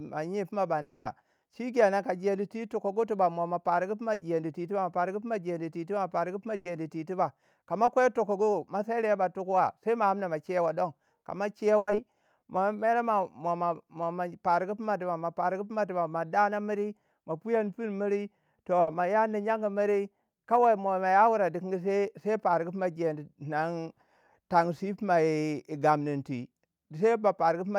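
Right at the start, from 0.81 to 1.07 s, the audio stops moving forward and the last sound is stretched into a fading buzz or hiss for about a quarter of a second before speech picks up further on, minus that chunk. That's likely a long network dropout.

Then there are four bursts of packet loss, at 4.13 to 4.23 s, 6.55 to 6.67 s, 11.77 to 11.89 s and 18.81 to 18.89 s, each 60 to 100 ms. Each time the receiver holds the last sound and turns it down, so you hear a brief held tone or hiss, and the speech jumps ahead with that bit gone.

At 7.85 to 7.89 s there's short concealed packet loss. About 20 ms of sound went missing, and the receiver patched it by extending what came before, so it's just a tiny smear or wobble in the speech.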